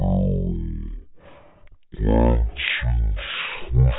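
Throughout, there's a wrong sample rate: the speech runs at a third of its speed and about 19 semitones low, which fits 48 kHz material played at 16 kHz.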